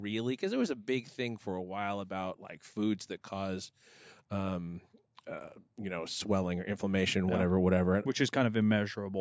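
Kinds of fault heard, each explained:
Automatic gain rising: 0.39–4.59 s and 5.76–7.59 s, gain control boosts too-quiet input, so speech and background swell together, about 6 dB, then about 4 dB.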